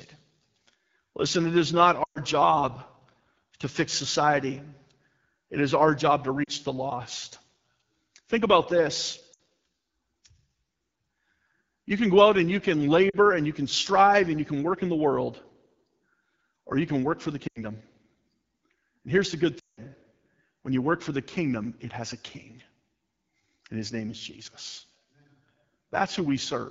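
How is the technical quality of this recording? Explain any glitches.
The technical quality is poor. The clip was coded at a low AMR-WB rate, and it has six separate dropouts.

Throughout, the AMR wideband (HD Voice) codec runs at a low rate, probably its 8.85 kbit/s mode. The sparse vocal-tract model leaves the speech audibly rough and raspy.

At 2.03–2.19, 6.44–6.50, 9.33–9.39, 13.09–13.17, 17.48–17.64 and 19.59–19.80 s, lost AMR speech frames forced the decoder to repeat earlier settings with falling gain. Short losses fade toward near silence within two frames. The longest, at 2.03 s and 19.59 s, drop to near silence before the speech returns.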